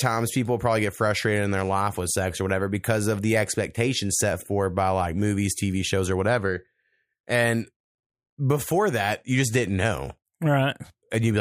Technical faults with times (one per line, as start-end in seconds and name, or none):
none